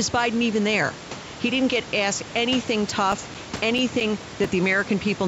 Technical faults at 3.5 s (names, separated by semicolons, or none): CD scratch ticks